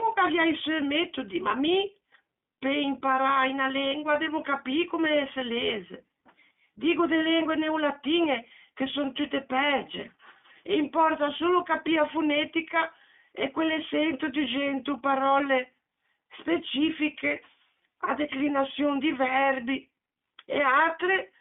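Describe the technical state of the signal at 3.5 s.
At 3.5 s the speech carries iLBC codec damage, present across the whole clip rather than at this moment alone. The codec codes each 20 ms frame's excitation independently of the frame before, which fits its 15.2 kbps mode. The line band runs from about 250 Hz to 3.6 kHz, so the audio sounds thin and muffled, and the frame-by-frame modelling leaves a plainly audible rough, synthetic edge on the speech.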